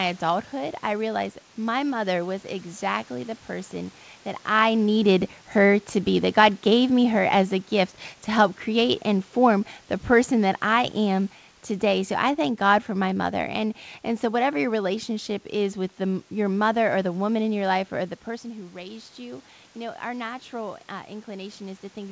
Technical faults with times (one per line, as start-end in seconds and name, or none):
4.50-7.60 automatic gain falling
18.42-22.11 automatic gain rising